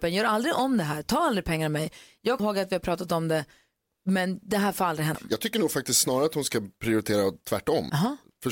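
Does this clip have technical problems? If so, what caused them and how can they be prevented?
Yes. Audio goes missing between chunks at 2.40 s, just before "ihåg att vi har", and at 5.15 s, right after "det här får aldrig". Each time roughly a third of a second of speech vanishes and the two sides butt together with no silence, which sets it apart from a dropout that leaves a gap. The likely cause is 3-second processing chunks losing audio at each handover. Buffering continuously across chunk boundaries, or overlapping the chunks, prevents it.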